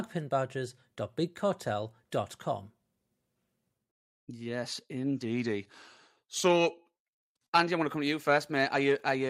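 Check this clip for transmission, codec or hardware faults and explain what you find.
One fault is audible in the speech. Drift correction step, 5.25 to 6.95 s: clock-matching software likely stepped the playback rate down by 5.45% to rebalance its buffer. Speed and pitch fall together by about 97 cents, nearly a semitone, so the speech turns abruptly slower and flatter, then snaps back at 6.95 s.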